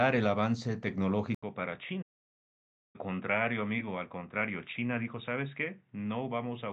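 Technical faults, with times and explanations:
1.35 s to end: input likely switched to a poorer device. After an 80 ms gap, the sound turns dull and narrower, drops about 5 dB, and gains a faint new noise floor.
2.02–2.96 s: playback stall. The sound stops mid-flow for 0.92 s, then resumes; the player likely ran out of data or was blocked before recovering.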